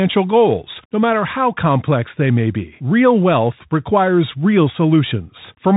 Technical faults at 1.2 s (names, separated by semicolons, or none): Bluetooth CVSD headset codec